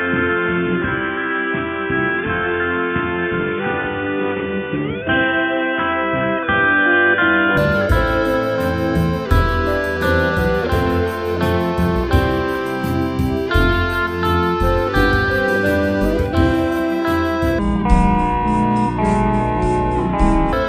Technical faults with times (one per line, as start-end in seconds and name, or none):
0.00-7.57 input switched to a poorer device
17.59-20.53 section at the wrong speed